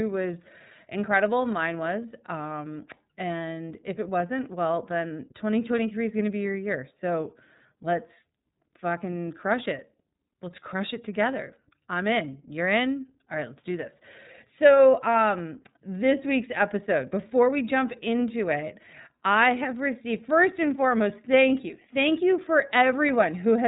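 Throughout, the speech carries iLBC codec damage. Nothing passes above 3.8 kHz. Each frame is coded independently, which fits 30 ms frames, leaving plainly rough, synthetic speech.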